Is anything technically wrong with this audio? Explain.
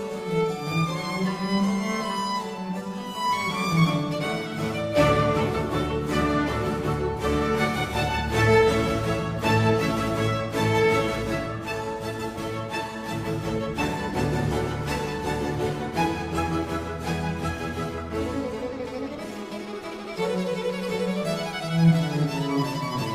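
Yes. Clock drift between sender and receiver runs through the whole clip: the sending clock is fast by roughly 4 percent, so the receiver's jitter buffer keeps overfilling and must shed material, which leaves small, unevenly spaced timing hiccups across the audio.

Repeated timing corrections run from 0.09 s to 22.6 s. The receiver keeps trimming short slices to hold pace with the faster sender, all in the same direction, so the audio plays at about 103 percent speed.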